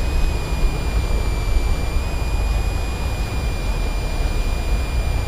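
A switching power supply in the chain runs in an audible burst mode or beats with another one, so a thin, high whistle sits under the sound for the whole clip, drifting between about 2.36 and 2.5 kHz, roughly 20 dB below the programme level.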